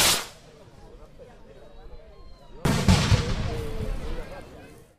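At 2.89 s the level steps up by about 12 dB instantly and holds to the end, the background noise rising with it. This sudden gain jump likely comes from an unramped digital gain change, whereas automatic gain control would swell gradually.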